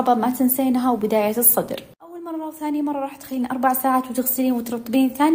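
Nothing goes wrong anywhere in the clip, so there's no fault to point to at any moment.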